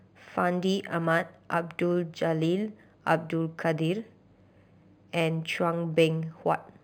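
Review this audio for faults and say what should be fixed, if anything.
Imaging from linear upsampling runs through the whole speech clip. The top of the band is dull, and above it sits a faint mirrored copy of the spectrum, roughly 30 dB down, between about 5.5 kHz and 11 kHz. That pattern fits audio at about 11 kHz raised to 48 kHz by joining samples with straight lines, a filter too weak to remove those copies. The result is a light metallic shimmer on sibilants. Unlike aliasing, which folds content downward into odd, unrelated tones, these images are an upward mirror of the speech band and track it exactly. Upsample with a proper band-limited interpolation filter that removes everything above the original band.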